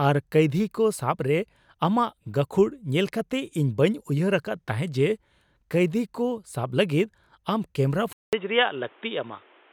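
Input switched to a poorer device at 8.13 s in this speech recording: after a 200 ms silence the sound turns dull and boxy through 9.73 s, with nothing above 3.8 kHz and fresh background noise about 30 dB below the speech at similar loudness, likely another microphone or a headset call profile taking over.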